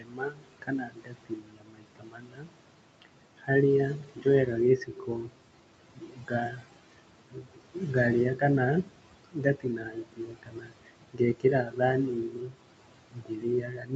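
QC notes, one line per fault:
Throughout: noise suppressor artifacts. The steady room noise is pulled down by about 22 dB between phrases and swells back under them.
0.0–3.5, 3.94–4.26, 4.77–7.95, 8.83–11.45, 11.63–11.81 and 12.11–13.95 s: speech cut by the noise suppressor. Quiet speech is mistaken for noise and lowered by up to about 22 dB (about 15 dB at 11.63 s), so it sounds swallowed and faint.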